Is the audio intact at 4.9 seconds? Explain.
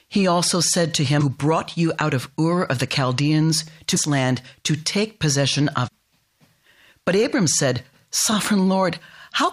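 Yes, at 4.9 seconds the speech runs on without any break, click, dropout or other audible fault.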